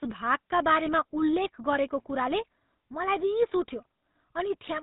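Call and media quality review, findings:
GSM full-rate codec, whole clip. Speech has that buzzy, gravelly edge, plainly audible, and nothing gets through above 3.9 kHz. The vocal-tract model is fed a coarse pulse train, with only every third excitation sample kept, hence the rasp. Sound fits a 13 kbps full-rate leg somewhere in the path.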